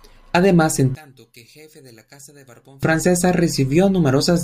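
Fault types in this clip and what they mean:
One channel inverted: From 0.95 to 2.83 s the speech drops by about 28 dB to a faint copy. The likely cause is one stereo channel with reversed polarity. Summed to mono, the shared centre content cancels, leaving only the faint difference between channels.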